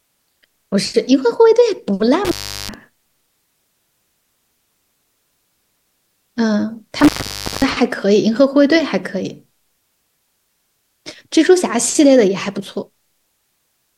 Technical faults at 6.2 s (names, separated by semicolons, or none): none